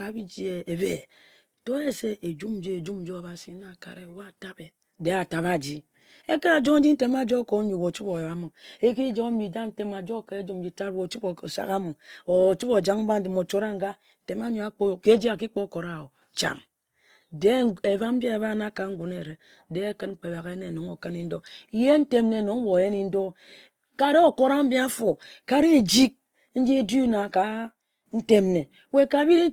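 From start to finish the speech carries plainly audible Opus compression damage: a rough, grainy texture where the upper bands get filled in with noise or folded copies of lower ones instead of dropping out, so there's little swirly MP3-style warble. The bandwidth still sounds full, and the grit fits Opus's music mode at a low rate, something like 24 kbps, which is the likely cause.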